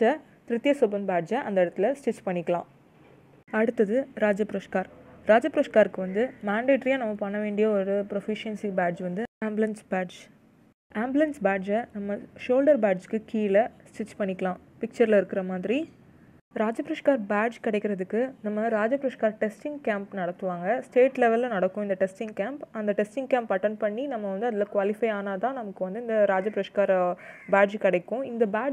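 Nothing in the clip sounds amiss at any point, so there's no fault to walk through here.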